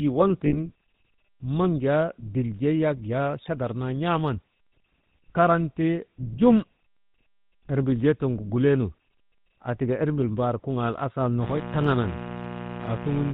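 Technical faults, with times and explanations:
Throughout, GSM full-rate codec: the speech is plainly buzzy and gravelly with nothing above 4 kHz, which fits 13 kbps GSM's pulse-driven vocal-tract model.
0.46 to 0.56 s, lost GSM frames: for about 60 ms the sound freezes into a metallic ring as the last good frame repeats, unlike a clean dropout's gap.
11.39 s to the end, mains buzz: a steady raspy 60 Hz buzz with harmonics into the kilohertz range, roughly 10 dB below the speech, unlike a smooth hum.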